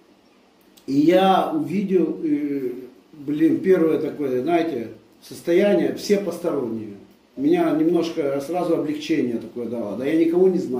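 No technical faults can be heard anywhere in the recording; the signal holds steady throughout.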